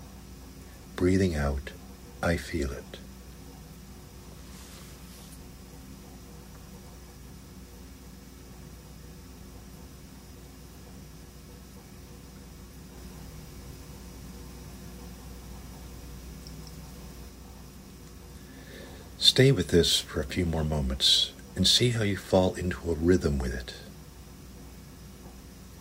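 From 12.97 to 17.29 s, a doubled audio track: an equal-level copy lags roughly 200 ms, likely via a second path. Spectrogram onsets appear twice, with abrupt edges.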